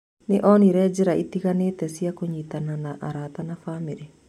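Speech, with nothing technically wrong that can be heard.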